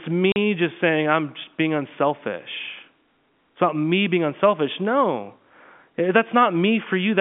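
At 0.32 s, just before "just saying I'm just", packet loss filled with silence leaves a 40 ms hole with hard edges, two 20-ms packets rather than smoothed concealment.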